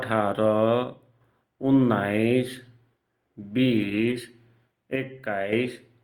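From 0.84 to 1.21 s, one channel drops out, likely from a lost stereo side. Once the channels are summed to mono, the shared sound falls abruptly by about 6 dB, then recovers. Between 3.77 and 4.11 s, a lost packet is rebuilt from error correction: the decoder plays low-bitrate copies carried in following packets, about 180 ms in all, so nothing goes silent, but the sound turns rougher and noisier. From 4.96 to 5.53 s, a channel drops out again, and the level dips by about 6 dB once more.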